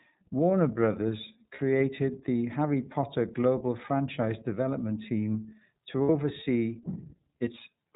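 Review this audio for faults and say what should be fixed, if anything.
The whole clip has passed through the iLBC codec: nothing above 4 kHz survives, and the speech sounds plainly rough and a bit synthetic, consistent with 30 ms frames.

There are lost iLBC frames at 1.55 to 1.6 s (30 ms) and 6.03 to 6.1 s (60 ms). The decoder repeats the last pitch cycle mixed with noise, so you get a short buzzy, held vowel, then clean recovery.

To fix it, move the call to a wideband codec with forward error correction on a link with less packet loss.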